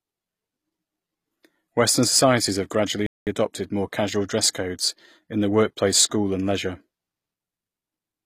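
Speech recording with plainly audible codec damage throughout, likely HE-AAC compression at a low bitrate around 24 kbps: the treble is rebuilt from copied lower bands, which shows as blocky, repeated patterns above the crossover on a spectrogram. A playback stall from 3.06 to 3.27 s, about 204 ms, cuts the audio after "societies have gradually" before "adopted more casual dress", appearing as a flat silent gap in the waveform.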